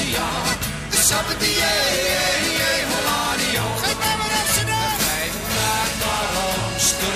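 No technical faults can be heard anywhere in the audio.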